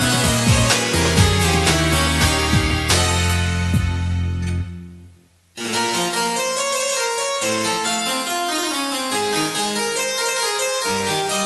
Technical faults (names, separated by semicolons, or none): none